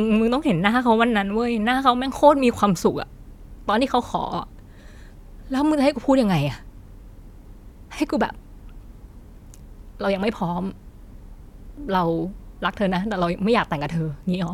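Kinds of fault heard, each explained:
Listening to the speech from beginning to end, nothing stood out as a technical fault.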